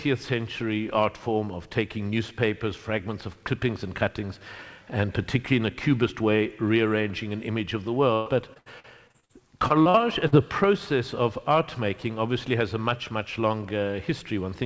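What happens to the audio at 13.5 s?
Nothing goes wrong at 13.5 s: the audio carries on intact through that moment, still limited to about 8 kHz by the G.722 call codec it passed through.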